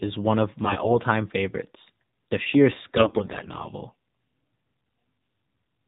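The whole clip runs through the AMR narrowband mobile codec. The spectrogram shows a hard ceiling at 4 kHz with nothing above it, and the voice has the buzzy, synthetic edge of a pulse-driven vocal-tract model at a low rate, which fits roughly 7.4 kbps AMR-NB.

AMR bit errors strike from 0.64 to 0.98 s, right after "is one of", and again from 2.96 to 3.65 s. Corrupted pulse positions and pitch, gain and spectrum values make the voice hoarse and gargly while level and pitch hold. The waveform envelope barely changes, but the spectrogram's harmonics smear into ragged, scratchy texture. The first burst has the higher bit error rate, about 10% against 7%.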